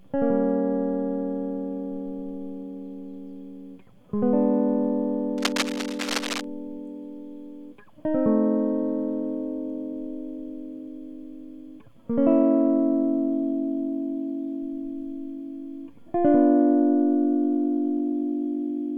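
From 5.37 to 6.44 s, dense, uneven scratching and rustling bursts sit over the music, nearly as loud as it. This is cable scratch noise. A worn cable, connector or control was likely moved. Its contact resistance jumped around rapidly.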